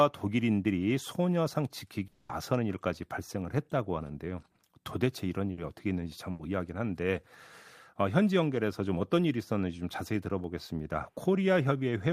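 Speech with a fading buzz or hiss filling 2.07 to 2.31 s, about 220 ms of sound that never returns, likely a long network dropout concealed by stretching the last sound. Shorter held, dimming smears at 5.51 to 5.59 s and 6.31 to 6.41 s each replace 60 and 80 ms of audio. They are bursts of packet loss, patched by continuing and fading the preceding sound.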